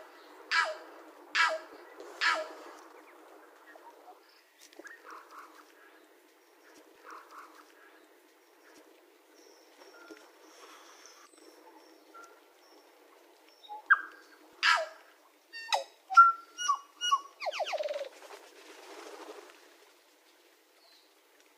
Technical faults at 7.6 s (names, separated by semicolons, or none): stream segment repeated